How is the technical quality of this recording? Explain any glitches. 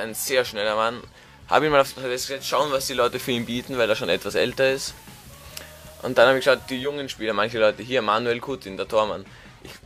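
One fault affects the quality. Digital radio blending to analogue occurs from 2.31 to 6.98 s: the receiver cross-fades over 241 ms to FM, bringing hiss about 30 dB down and a level shift of about 3 dB.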